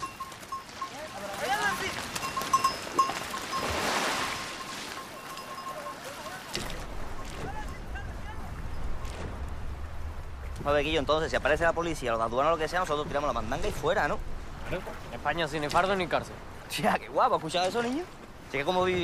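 No technical fault can be heard anywhere in the audio, and the signal stays intact and continuous throughout.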